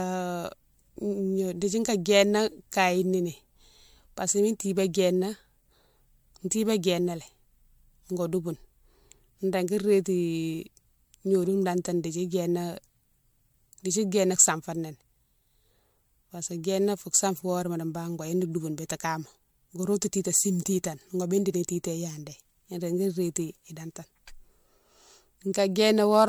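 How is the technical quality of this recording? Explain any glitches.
The technical quality is degraded by generation loss across the whole recording. The speech sounds swirly, hollow and smeared, and consonant onsets lose their edge. The likely cause is about four successive MP3 encodes at roughly 96 kbit/s, each pass requantising on a shifted frame grid so the errors compound. On a spectrogram the band stops near 20.1 kHz and shows flickering holes and smeared, blurred transients. The waveform's attacks look softened.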